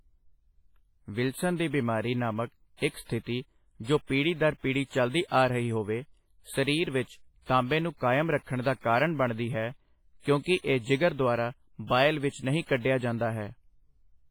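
Speech, with heavy codec damage throughout. It sounds ringing and washy, with hiss that swells and fades with the voice. This is likely WMA compression at a low bitrate, near 24 kbps. Weak detail drops out, while content still reaches about 21.4 kHz.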